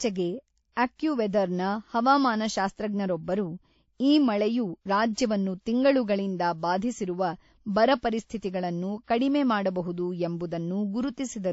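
From start to finish, the speech has nothing above 7.6 kHz, so it sounds dull and closed in. Two kinds of compression damage are heard together. This is likely transcoding between lossy codecs. The sound points to a low-rate MP3 stage, around 36 kbit/s, followed by WMA at about 64 kbit/s. The second codec spent its bits copying the first one's artefacts and added its own.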